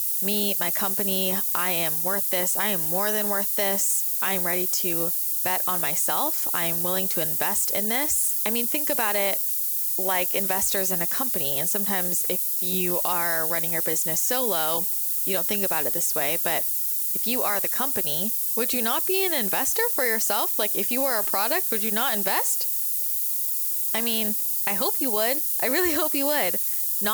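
From start to finish the speech carries low bit depth with noise shaping: only 4 bits are used, and the rounding error is pushed upward in frequency, giving a thin, steady hiss nearly as loud as the voice. A spectrogram shows a noise floor climbing sharply toward the top band.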